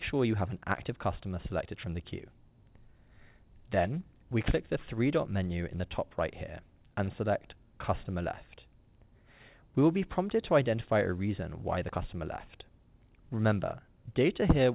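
At 7.04 to 7.10 s, a short stall from a late packet holds the sound for about 31 ms and then resumes, which sets it apart from a dropout because nothing is skipped. The narrowband call path, with nothing above 4 kHz, is audible throughout.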